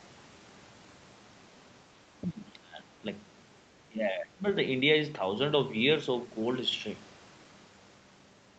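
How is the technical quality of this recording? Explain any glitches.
The recording has three short stretches where the speech gets pushed down, all within the first 4.5 s of the clip, on a call-style signal that tops out at 8 kHz.

From 1.95 to 2.05 s the level dips by roughly 10 dB. Then from 2.22 to 3.06 s and again from 3.83 to 4.45 s it sinks much harder, around 20 dB, so the speech is pushed well down. That pattern is likely speech suppressed in double talk: with both ends talking at once, the echo canceller couldn't tell this talker from its own loudspeaker echo and clamped down on everything.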